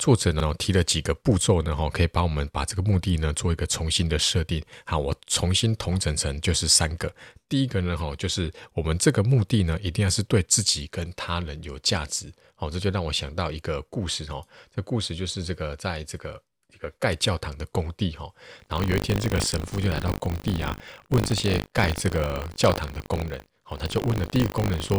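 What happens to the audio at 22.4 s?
At 22.4 s the audio is inside a stretch of buffer tearing that runs from 18.58 s to the end of the clip. The writer and the playback hardware have drifted out of step around the ring buffer, so a small slice of each period, roughly a tenth, is stale audio from about 70 ms earlier, spliced in with hard edges. That gives a rattling 50 Hz buzz. Unlike 50 Hz mains hum, it vanishes in pauses and is heard only while sound is present.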